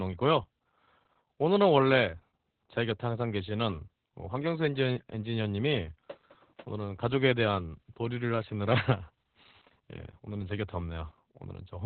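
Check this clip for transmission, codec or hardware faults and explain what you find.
The speech carries heavy Opus voice compression for its full length. Nothing is heard above about 4.2 kHz, a narrowband SILK mode with coarse excitation coding, which fits roughly 8 kbps. The result is muffled, hoarse and slightly robotic.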